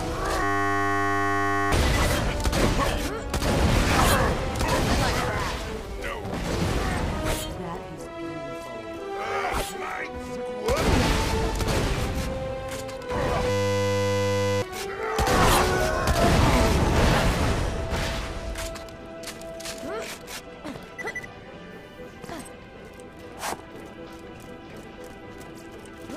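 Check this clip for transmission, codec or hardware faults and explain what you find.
Two faults of the same kind turn up. System hang loop at 0.43 to 1.72 s and again at 13.5 to 14.62 s: the system froze while the sound hardware kept replaying one 10 ms slice of its buffer, over a hundred times each. Each event is a steady 100 Hz buzz, and about one and a half seconds, then about one second, of audio go missing.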